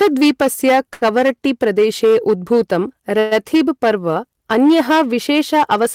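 Hard clipping runs through the whole speech clip: the level is pushed about 10 dB past what the chain can pass, so a fair share of peaks get sheared flat, giving a harsh fuzz on loud syllables. At 0.89 s a short stall from a late packet holds the last sound for 21 ms, then a second one stretches it another 77 ms up to 1.03 s. Both come across as a brief buzzy hang before speech carries on with nothing lost. From 3.19 to 3.33 s there's a call audio freeze: the sound smears into a fading buzz for 120 ms, then resumes at "पर्व अन्यः", likely because packets got held up and the jitter buffer ran dry.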